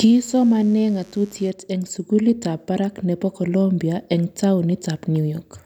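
Mains buzz runs from 0.0 to 1.5 s: switching spikes on 50 Hz mains leak in, adding raspy harmonics sitting well below the speech.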